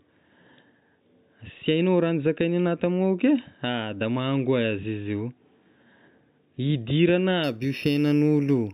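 A speech clip that, from 7.44 s to the end, shows imaging from linear upsampling: the top of the band dulls and a faint metallic shimmer rides on sibilants. A spectrogram shows a weakened region below 4 kHz with a dim mirrored copy between 4 and 8 kHz, about 25 dB down. This points to 8 kHz material raised to 48 kHz by straight-line interpolation.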